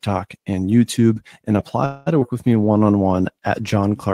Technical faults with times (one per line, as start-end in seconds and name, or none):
1.85-2.08 call audio freeze
2.20-2.23 skip ahead
2.33-2.85 jitter buffer slow-down